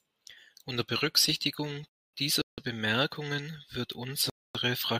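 It's a speech clip with two kinds of dropout. There's a gap between chunks twice, from 1.89 to 2.14 s and again from 4.30 to 4.55 s. Each is a 250 ms hole, and they come after every 2 s of audio. That points to audio delivered in 2-second blocks with dead air inserted at each join. In between, at 2.42 to 2.58 s, there's a rebuffering stall. The sound just freezes into silence for about 0.16 s and then picks up exactly where it left off. The player ran dry waiting for data, so nothing is missing, but the timeline gets stretched.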